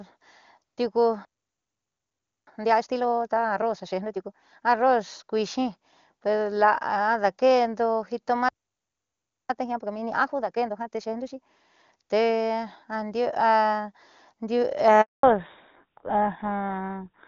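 At 1.25 s the speech halts and stays silent for 1.22 s until 2.47 s. This is a playback stall, likely the player running out of buffered data. From 2.47 to 4.89 s comes a time-compressed catch-up: the speech runs at 1.5x speed at normal pitch, as short pieces are cut out and cross-faded. The same pair recurs with a 1.01 s stall from 8.49 to 9.50 s, followed by catch-up at 1.5x until 11.50 s. At 15.01 s a 220 ms handover gap cuts the speech off as the call switches networks, and whatever was said in that interval is lost. From 15.23 s to the end, a fallback to narrowband removes everything above 4 kHz. The clear wideband sound, consistent with AMR-WB at a high rate, turns duller and rougher, which fits a GSM full-rate codec.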